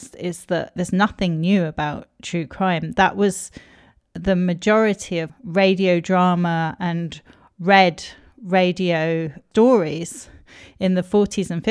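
A speech recording with no audible technical faults: the signal runs continuously, with no interruptions, distortion or other defects anywhere in it.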